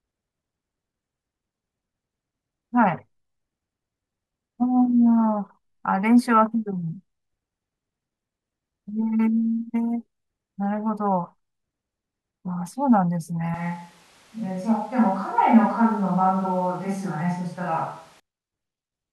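Speech recording that turns abruptly roomy and hollow, losing low end at nearly unchanged level, from 13.54 to 18.20 s, likely a switch to a distant microphone, with faint room noise underneath.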